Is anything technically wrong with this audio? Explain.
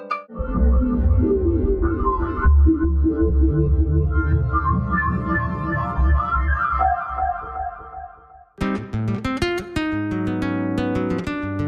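No, nothing here sounds technically wrong, and it all comes across just as it should.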